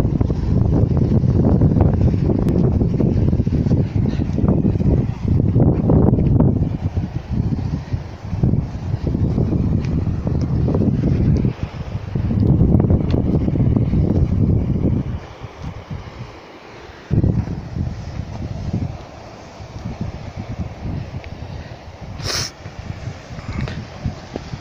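A single burst of damaged data in the compressed stream at 2.49 s gives a brief glitch as the decoder loses frame sync and searches for the next valid header.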